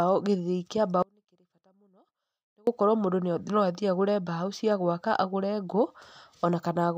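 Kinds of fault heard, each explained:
Audio dropout to a faint residue: the speech cuts out abruptly at 1.03 s and returns at 2.67 s. The 1.65 s gap holds only a faint residue, about 35 dB down, likely a brief feed loss while the path stayed live. The waveform shrinks to a thin band, and the spectrogram shows a hard-edged, near-empty block.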